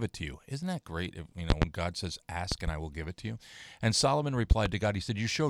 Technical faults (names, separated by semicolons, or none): loud pop